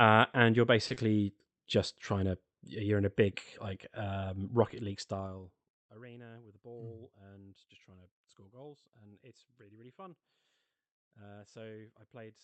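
At 0.87 to 0.92 s, a short stall from a late packet holds the speech about 30 ms too long. The held sound buzzes or dips slightly before resuming exactly where it stopped.

At 0.94 to 0.98 s, short concealed packet loss fills a 20 ms gap with continued sound. A brief smear or wobble results, and a consonant may vanish.

From 4.87 to 5.77 s, zipper noise rides on a level drop of roughly 20 dB. The level falls in unsmoothed steps of about 2 dB, about fifteen per second, each clicking audibly.

At 6.37 to 6.59 s, a jitter buffer speed-up trims around 40 ms of pitch periods. The speech runs at 113 percent speed with unchanged pitch and sounds hurried.

Throughout, the call codec limits the top end to about 8 kHz.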